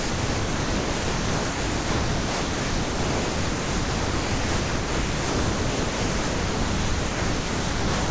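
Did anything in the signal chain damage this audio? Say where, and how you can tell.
Yes, in call processing: sound dropped by the voice detector. It likely took the speech for background, so from 0 to 8.1 s only steady comfort noise plays.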